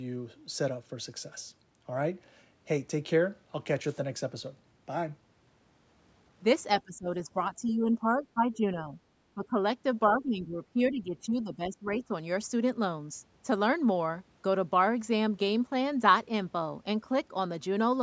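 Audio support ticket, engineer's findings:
Speech suppressed in double talk, 6.84–7.09 s, 7.28–8.96 s, 9.34–9.6 s, 10.16–12.13 s: speech dips in pieces, up to about 20 dB. Likely echo canceller attenuating near-end talker during far-end activity.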